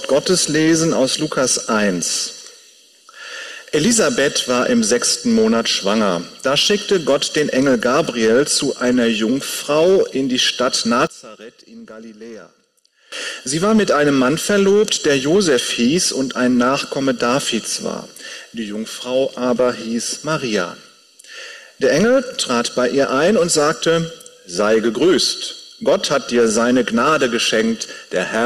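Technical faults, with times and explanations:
11.07–13.12 s, one channel inverted: the sound drops about 20 dB to a faint residue, likely from one channel's reversed polarity cancelling shared content in mono.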